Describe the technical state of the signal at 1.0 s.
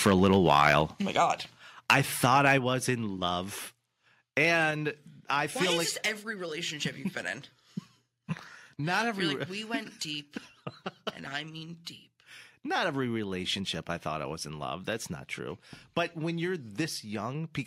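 At 1.02 s the level of the speech and background drops abruptly by about 3 dB, a microphone volume stepped down, likely the call software cutting the input gain in one step.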